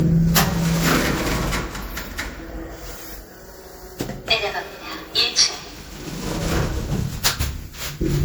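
From start to end the sound carries generation loss. The top end swirls and warbles, the midrange has a hollow, scooped quality, and transients arrive smeared rather than crisp. That degradation is heavier than a single lossy pass would leave, which fits the audio likely having been run through an MP3 encoder around seven times at something near 96 kbit/s, each re-encode quantising on a shifted frame grid and stacking fresh noise and spectral gaps onto the last.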